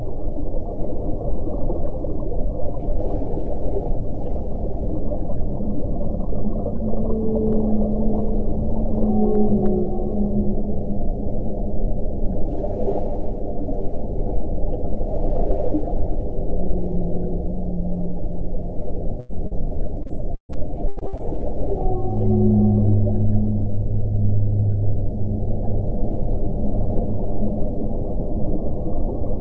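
The audio has passed through a call path: nothing is present above 8 kHz, which fits a wideband call codec such as G.722, and carries that codec's usual coding noise. At 19.20 to 19.31 s there is a burst of packet loss. Audio that arrived too late or not at all left a hole of about 100 ms, and the receiver covered 91 ms of it by extending the last sound and fading it down, so the gap is heard as either a held buzz or a fading hiss before the audio picks up further on with that stretch gone. Shortly after, from 19.47 to 19.53 s, comes a short concealed packet loss of 40 ms. The decoder bridged it by continuing the preceding sound, from its pitch if voiced or as shaped noise if not, then crossfaded back into the real signal, leaving a brief smear or wobble. From 20.03 to 21.21 s the loss turns into repeated packet loss with a robotic sound. Eight separate gaps, the longest 138 ms, together removed about 400 ms of audio, and about 380 ms of patched sound, roughly a third of that span, stands in for it. 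Because each concealed hole is followed closely by the next, the passage sounds choppy and robotic, with fragments missing.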